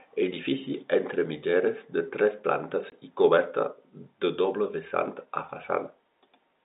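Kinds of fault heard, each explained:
Packet loss filled with silence: a packet of the G.711 telephone stream went missing and the receiver substituted silence, leaving a 20 ms gap from 2.90 to 2.92 s, consistent with one lost packet, between "mitgeres de tres plantes" and "i coberta de doble", with abrupt edges.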